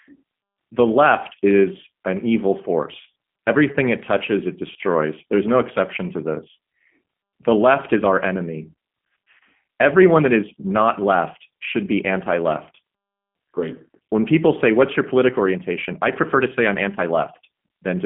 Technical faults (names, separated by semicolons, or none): G.729 codec